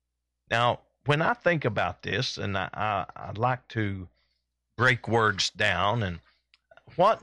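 From 1.16 to 4.31 s, just before "break words down and", the speech turns dull and muffled from de-emphasis applied wrongly: a treble cut hit audio lacking pre-emphasis, or was applied twice, pulling 10 kHz about 14 dB below 1 kHz. On a spectrogram, upper bands fade smoothly; the waveform looks softer-edged.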